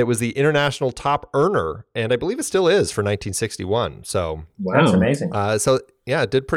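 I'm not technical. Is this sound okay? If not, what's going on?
Yes, nothing in this recording stood out as a problem when I listened to it.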